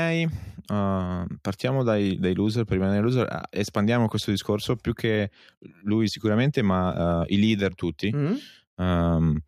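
A speech recording carries clock slip clicks from 0.11 s to 9.45 s: faint ticks roughly every 0.07 s, about a hundred in total, merging into a soft rattle. A spectrogram shows thin evenly spaced vertical lines, and the waveform shows tiny single-sample steps. The likely cause is two unsynchronised clocks differing by around 300 ppm.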